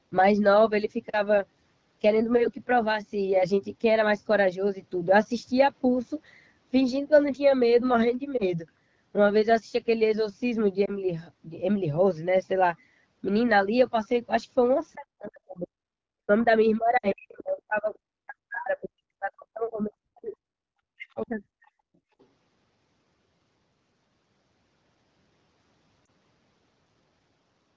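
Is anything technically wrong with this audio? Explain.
Yes. The speech has four kinds of fault: lost AMR speech frames, speech suppressed in double talk, the other side's voice leaking through, and background gated by the echo canceller.

Lost AMR speech frames occur at 8.38 to 8.53 s, 10.86 to 10.91 s, 16.97 to 17.12 s and 26.05 to 26.09 s. Frames failed their checksum after radio errors. The decoder then rebuilt each gap from the last good pitch and vocal tract settings, with falling gain. The single losses fit one 20 ms frame each and give a short dip or warble. The 16.97 s gap fits about three frames, around 60 ms. There the sound drops to near silence within two frames, and the voice comes back weak or rough for a moment.

Speech suppressed in double talk runs from 14.94 to 15.87 s, 16.23 to 16.46 s, 16.78 to 20.46 s and 20.63 to 21.71 s. The likely cause is both parties talking at once. 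The echo canceller could not tell the talker from loudspeaker echo, so it pulled the microphone down. The voice drops steeply, around 40 dB at its deepest. The long stretch after 16.78 s is affected for about 3 s in total.

The other side's voice leaking through appears at 20.28 to 20.32 s and 22.19 to 22.26 s. The likely cause is loudspeaker echo that the canceller failed to remove fully. It is faint, roughly 35 to 40 dB below the talker. It comes through as brief scraps of a second voice.

Background gated by the echo canceller hits at 21.99 to 22.16 s. While the loudspeaker played, the canceller clamped the microphone hard. The room sound dips by about 31 dB for roughly 150 ms. Then it returns as the gate releases, just before the leak at 22.19 s.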